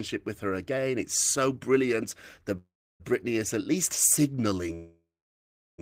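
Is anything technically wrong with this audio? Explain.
Yes. There are two call audio freezes. The first runs from 2.57 to 3.02 s, and the second from 4.75 to 5.80 s. The likely cause is packets held up in transit, so the jitter buffer ran dry. At each point the receiver stretched the last sound into a fading buzz or hiss and then fell to silence, for about 310 ms and then about 720 ms. When the packets arrived, the speech resumed where it had stopped, with nothing lost, but it was now delayed by 425 ms and then 1038 ms.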